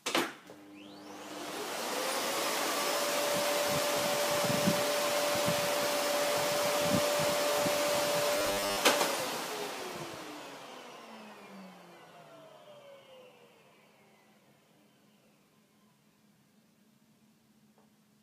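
Sound recording with robotic sound from repeated short buffers between 8.38 and 8.77 s: a rigid, metallic 100 Hz buzz replaces most of that stretch. The likely cause is audio arriving too seldom, with roughly 10 ms fragments replayed to fill the gaps.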